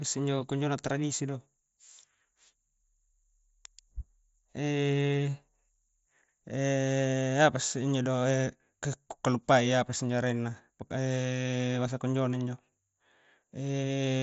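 No faults to report in this speech; it arrives over a Bluetooth mSBC headset link, with the band stopping at about 7.7 kHz and a light grain from the codec.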